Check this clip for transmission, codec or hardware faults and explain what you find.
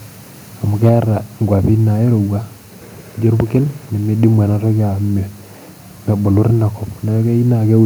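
Two hardware-side faults affect this speech clip, both at the microphone input.

Microphone overload, at 0.83 to 0.89 s, 1.65 to 1.70 s and 6.37 to 6.47 s: peaks sound harsh and crackly, likely from input gain driving the converter past full scale, about 3 dB over at first. The waveform shows flattened tops, and the spectrogram shows broadband smearing above the harmonics.

Microphone volume stepped down, at 0.89 s: the level drops abruptly by 3 dB right after the first overload, likely an automatic input-gain correction. The waveform envelope steps down, and the spectrogram dims evenly across all frequencies.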